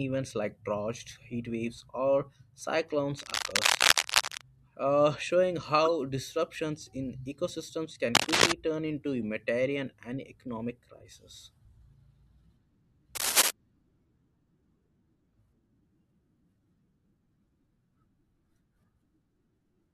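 From 3.18 to 4.41 s, just before "uh showing", a burst of cable scratch noise sits over the speech: dense, irregular crackle and rustle, roughly 5 dB louder than the speech itself. The cause is likely a worn cable, connector or control being moved, so that its contact resistance jumps about rapidly. The same scratching returns from 8.15 to 8.52 s, between "ecosystems can" and "turn into humanitarian and", and again from 13.15 to 13.51 s, both at a similar level.

At 5.85 to 5.88 s, just after "uh showing", a corrupt frame was decoded. Damaged bits in a couple of compressed frames were played as if valid, so the decoder put energy at the wrong frequencies for those few tens of milliseconds. The result is a short blip or chirp, peaking around 20 dB below full scale.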